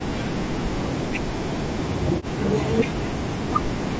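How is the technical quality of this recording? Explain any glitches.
The recording is marred by repeated speech suppression. The voice sinks by as much as about 40 dB from 0.36 to 2.47 s, again from 2.66 to 3.39 s, and once more from 3.86 s to the end. This is likely speech suppressed in double talk. An echo canceller, unable to separate this talker from the far end's loudspeaker echo while both spoke, pulled the level down. Unlike packet-loss dropouts, which leave short hard gaps, these fades ride with the overlapping talk. The band stops at 8 kHz, as call microphone processing does.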